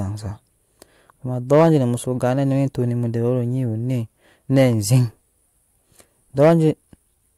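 At 1.52 to 1.75 s, and again at 6.42 to 6.54 s, the speech shows hard clipping. Peaks driven about 4 dB and about 5 dB past what a stage could pass are cut flat. The flattened tops add high harmonics, heard as a brief harsh crackle.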